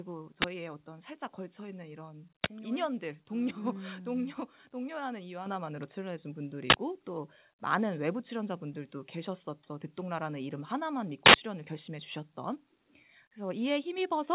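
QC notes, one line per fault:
5.46 s and 13.98 s, microphone volume stepped up: the call software judged the microphone input too quiet and raised the device's input volume in a single step, by about 8 dB at 5.46 s and again by about 4 dB at 13.98 s. Because the gain changes ahead of any processing, speech and background noise jump louder together at each instant, heard as abrupt level lifts within the narrowband call audio, which has nothing above 4 kHz.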